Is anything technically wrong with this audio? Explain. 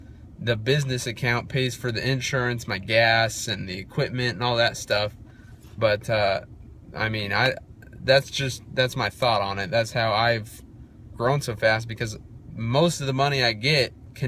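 No, nothing technically wrong can be heard here.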